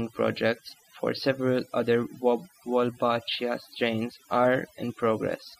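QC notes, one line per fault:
Throughout: overdone noise removal. The noise reduction was pushed far too hard, so any frequency band close to its noise estimate is pulled right down or gated off, and the softer parts of the speech go with the noise. Pauses drop to near silence scattered with twinkling, chirpy specks. On a spectrogram the background shows as dark gaps dotted with isolated flickering bins, and the quiet edges of the speech look ragged and eaten away.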